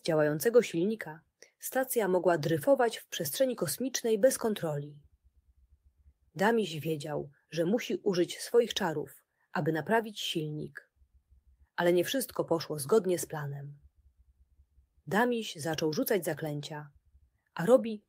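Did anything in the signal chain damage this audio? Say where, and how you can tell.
No, nothing in the signal chain audibly damaged this audio.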